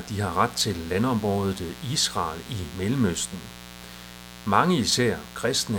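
From start to finish there's mains buzz riding under the speech, a steady raspy edge built on 60 Hz harmonics, sitting roughly 20 dB below the talker.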